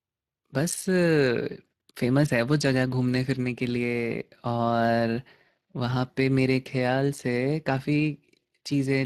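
It's a speech clip with Speex codec damage running the whole way through, and it's plainly audible: a hoarse, noisy grain from the CELP coding starving the excitation of bits. The sound points to a bitrate somewhere around 22 kbps.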